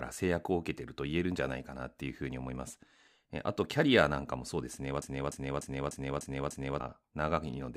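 A speech clip in which the player, encoder or stream likely stalled and kept resending its last buffered fragment, a broken-record loop. From 5.02 to 6.80 s, a roughly 0.3 s slice of speech repeats six times back to back, and whatever should have been heard there is lost.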